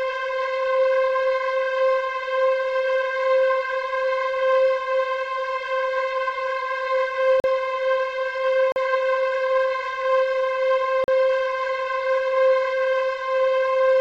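At 7.40, 8.72 and 11.04 s, the sound drops out for 40 ms each time. These are blocks of digital silence. Samples were replaced by zeros, so the audio cuts off and returns without a fade. Each gap makes a short hole.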